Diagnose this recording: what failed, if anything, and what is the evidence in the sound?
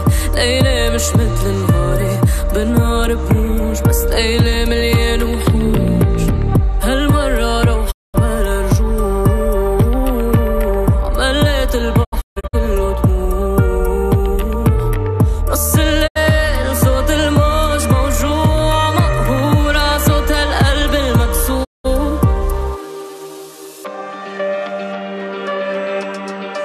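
The failure is at the reception stage, a digital broadcast dropout happening four times. The sound quickly fades to silence over about 20 ms and comes back later at 7.90–8.16 s, 16.06–16.17 s and 21.63–21.86 s. At 12.03–12.55 s it breaks into several short holes across about 480 ms, the longest 144 ms. The receiver lost the signal or rejected corrupted frames and muted until clean ones returned. The hole lengths fit 24 ms frames, and whatever was broadcast during each gap is gone.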